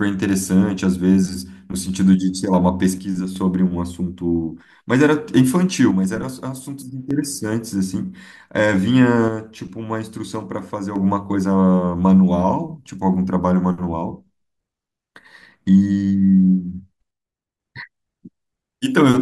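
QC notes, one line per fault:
2.98–3.36 s, 5.91–7.11 s, 9.28–10.96 s, 17.11–17.60 s: one channel drops out. The speech level suddenly falls by about 6 dB and then recovers. This is likely one stereo channel going silent, so the mono sum keeps only half of the shared signal.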